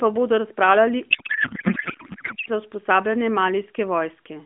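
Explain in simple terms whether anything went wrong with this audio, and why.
Right after "pa bodo razpravljali", from 1.11 to 2.50 s, the speech turns into garbled noise and warble. This is a codec payload misread. The phone codec's data was packed one way but unpacked another, so the decoder read scrambled settings. Clear sound returns once both sides match again.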